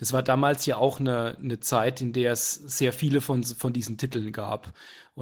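Throughout this speech clip the voice sounds hoarse and faintly robotic. This is plainly audible Opus voice compression. The sound suggests hybrid mode at a bitrate around 16 kbps, where a linear-prediction coder handles the band below 8 kHz and a transform layer covers the top of a fullband signal. The excitation is coded so coarsely that the speech turns rough.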